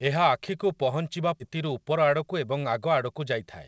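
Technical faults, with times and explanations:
1.40 to 1.42 s, skip ahead: Playback jumps forward with no gap and nothing filled in. Roughly 0.7 s of the sound is simply gone, and the two sides are butted almost directly together. A stretch of audio was lost in transit or discarded when the jitter buffer overflowed while later packets were already queued. The receiver moved straight on to the waiting audio, cutting the accumulated delay by about the same 0.7 s.
1.49 to 3.47 s, jitter buffer speed-up: Right after the jump the sound runs at 110% speed while keeping its pitch, so it comes across as hurried. Even after the skip, the jitter buffer still held more audio than its target. To shed that backlog it repeatedly removed short slices of one or a few pitch periods, about a fifth of a second in total. Through the G.722 path, which has nothing above 8 kHz, these small cuts blend into a rushed delivery.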